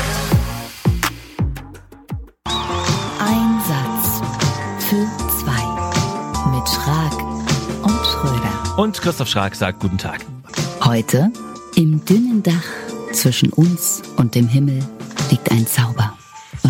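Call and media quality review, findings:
Sample clock jitter from 4.63 s to end: hiss and roughness tracking loud, bright passages, gone in gaps. Unstable converter clock, around a microsecond, error roughly 35 dB down.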